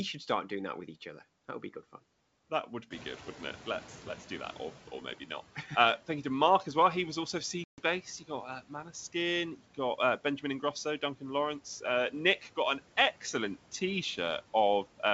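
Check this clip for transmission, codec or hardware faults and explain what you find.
Two faults stand out in this speech clip: a noise suppressor that falls behind a rise in room noise, and a packet-loss gap on the ADPCM-coded call.

Noise suppressor catching up, 2.9 to 4.93 s, after "good fun that would" and before "maybe not": the room noise jumps by about 15 dB near 3.0 s, but the suppressor's noise estimate is still tuned to the quieter background. For roughly 2 s the louder noise comes through with less reduction, then sinks by about 9 dB as the estimate adapts, leaving a fade in the background.

Packet loss on an ADPCM call, 7.64 to 7.81 s, just after "was also": about 140 ms of audio drops out and is filled with silence, a gap that points to something like fifteen lost packets. Because the decoder's adaptive predictor and step size drift out of step with the sender's, the sound comes back from the hard-edged hole slightly distorted before it settles. 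The G.722 wideband coding itself adds only faint hiss above 4 kHz.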